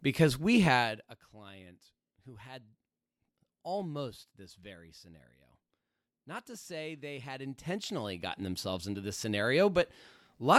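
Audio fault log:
0.68–1.22 s, zipper noise: just after "because we", the level falls by roughly 15 dB in steps of about 1 dB, around 50 of them a second, with no smoothing between steps. Each jump is a tiny discontinuity in the waveform, so a rapid ticking, zipping texture rides on the sound until the level settles. A smooth fader move of the same depth would give a clean dip with no clicks. Here the individual steps are audible.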